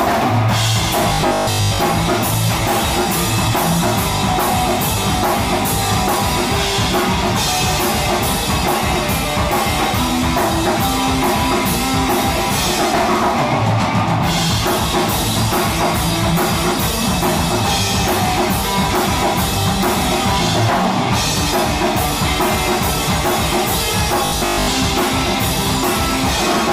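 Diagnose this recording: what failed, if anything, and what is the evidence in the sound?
Robotic sound from repeated short buffers appears at 1.09 to 1.79 s and again at 24.26 to 24.68 s, where the sound turns into a rigid, metallic buzz fixed near 50 Hz. That pitch matches a 20 ms segment being looped, and most of the audio in each stretch is replaced by repeats rather than new material. The likely failure is at the driver or buffer stage: fresh audio arrived too seldom, so playback kept recycling the last short buffer while the real signal was skipped.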